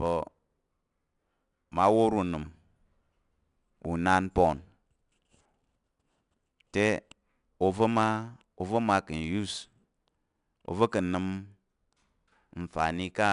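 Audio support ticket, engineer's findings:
Gritty hiss riding on every loud syllable, full length of the speech clip. Harsh edge on plosives and sharp onsets. Component: 4-bit ADPCM compression stage. Each sample coded as a coarse 4-bit step from a predicted value, so quantisation noise tracks signal level, and the adaptive step lags on fast attacks. Band empty above 10.7 kHz, dulling the top end. Sound points to an ADPCM stream near 89 kbps. Damage plainly audible.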